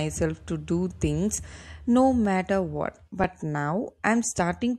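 At 2.25 s, just after "to do things no", and again at 3.24 s, an underrun with held sample flattens the waveform for about 1.6 ms and 1.3 ms (the second spans 64 samples). The converter froze on its last value, and with roughly 1.5 ms of audio lost each time, the sound stops briefly, seen as a flat step in the waveform.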